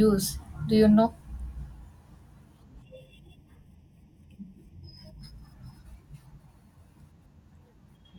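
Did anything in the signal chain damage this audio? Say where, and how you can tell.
Yes. Between 2.82 and 5.21 s, one channel runs late by roughly 0.4 ms before the two are folded to mono, causing channel delay comb filtering. Shared content cancels in evenly spaced notches starting near 1.5 kHz, making the speech sound hollow and phasey.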